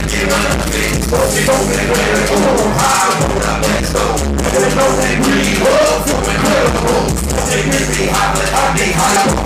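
Damaged data in a compressed stream at 1.47, 3.79 and 9.15 s: corrupted bytes stop the decoder reading those frames, so it loses sync and searches for the next frame header. Each break lasts under 20 ms, a brief chirp, squawk, click or gap.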